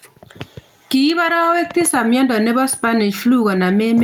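Gain pumping runs through the whole speech clip: the gain ducks by around 10 dB under each loud syllable, leaving the level squashed. The likely cause is input gain set far too high, with a fast limiter clamping every peak.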